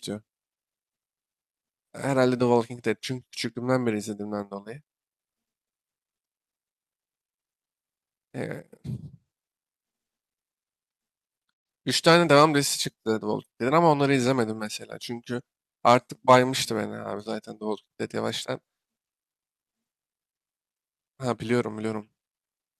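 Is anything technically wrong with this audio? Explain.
No, nothing technically wrong.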